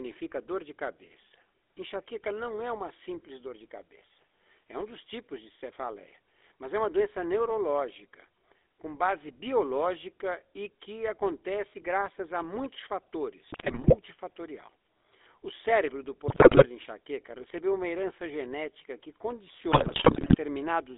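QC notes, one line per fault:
throughout: GSM full-rate codec. Band is limited to about 300 Hz–3.6 kHz with buzzy, gravelly roughness from pulse-driven excitation. The spectrogram shows nothing above 3.6 kHz and smeared harmonics.
13.48–13.96, 16.28–16.66, 19.72–20.37 s: GSM bit errors. Corrupted filter, pitch and gain values produce squawks, pops and gargling. They appear as level spikes and distorted, blotchy spectral frames.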